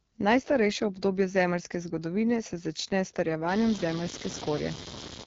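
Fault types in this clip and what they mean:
AMR wideband (HD Voice) codec: The speech runs through AMR-WB at a low rate, which fits 8.85 kbit/s, so it sounds plainly rough and raspy. On a spectrogram, content stops near 7.6 kHz, and above about 6.4 kHz the band shows smeared noise texture rather than clear harmonics.
Computer activity noise: From 3.49 s to the end, a buzzing pulse train at roughly 100 Hz sits about 10 dB below the speech. It comes from processor or peripheral load disturbing the audio ground. It shows on a spectrogram as evenly spaced vertical striations and on the waveform as regular spikes that continue between syllables.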